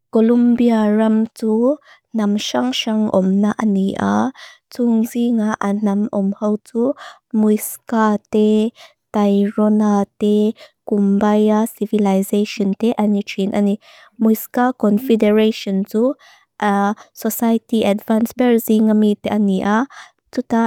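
No technical faults can be heard anywhere in the speech.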